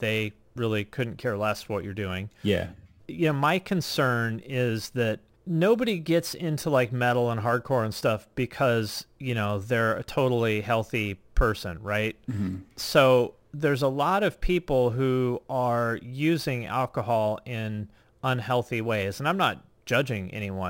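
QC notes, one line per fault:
Throughout: imaging from sample-and-hold upsampling. A bright metallic fizz sits on the speech and rises and falls with its level. Mirrored copies of the speech spectrum fill the 12 kHz to 24 kHz band at about 24 dB below the signal, moving opposite to the pitch. This points to 24 kHz material raised to 44.1 kHz by holding each sample, with no interpolation filter to suppress the images.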